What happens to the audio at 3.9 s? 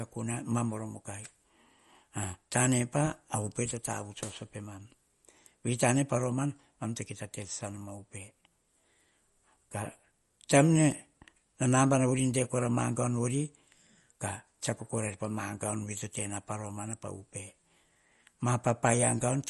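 At 3.9 s you're hearing what's likely MP3 compression, present throughout: nothing above 11.8 kHz, with weak frequency lines flickering into a watery swirl, which fits a starved bitrate around 48 kbps.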